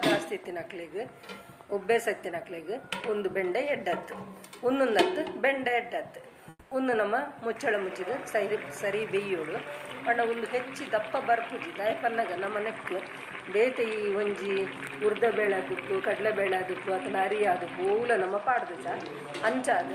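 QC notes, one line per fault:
6.49 to 6.71 s, comfort noise in place of the background: the sender likely stopped transmitting during this quiet stretch under Opus DTX, and the receiver filled the 220 ms gap with synthetic noise. The genuine background, sitting about 28 dB below the loud parts, gives way to a flat, textureless hiss roughly matched in spectrum but about 2 dB quieter, so the ambience briefly turns smooth and slightly different in tone before the real sound returns.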